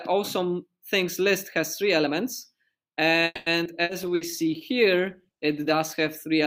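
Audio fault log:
3.25–3.49 s, call audio freeze: the sound stalls for about 0.21 s, the last moment stretched into a fading buzz or hiss that ends in roughly 20 ms of silence, and then carries on exactly where it stopped. Nothing is lost, so the gap simply pushes everything after it about 210 ms later. That is what separates it from a loss burst. The likely cause is packets held up in transit until the jitter buffer ran dry.
3.64–3.68 s, skip ahead: playback jumps forward abruptly, with only about 10 ms of filler at the seam. Around 70 ms of audio is gone, and the two sides are butted almost directly together. Dropping that audio cut the delay by roughly 50 ms, probably shedding some of the lag built up by the freeze just before. Unlike a loss burst, there is no held buzz or fading hiss covering the hole, just a sudden jump.
3.83–3.92 s and 4.15–4.24 s, burst of packet loss: in each case about 60 ms of audio never arrives in time. 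The receiver covers the hole with 60 ms of the previous sound, stretched and faded, and then resumes further along. The missing stretch is not recovered. That distinguishes these from the freeze, where nothing went missing, and from the skip, where no concealment filler bridges the cut.
4.04–6.35 s, call bitrate drop: the encoder's rate falls from 128 kbps to 22 kbps and stays at the bottom for about 2.2 s. The starved encoder codes coarsely and loses high-frequency detail, so the sound turns rough, watery or muffled. Because the change is in timbre and spans seconds, it is not a brief dropout. Timing and pitch are untouched by it. Only the quality of the sound degrades until the rate recovers.
4.06–4.83 s, jitter buffer slow-down: for about three quarters of a second the audio plays at roughly 94% speed, with about 55 ms added by repeating single pitch periods and slivers of quieter moments. 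The pitch holds steady while sounds drag. That separates it from the freeze's single stall: the buffer is rebuilding its reserve gradually rather than halting outright.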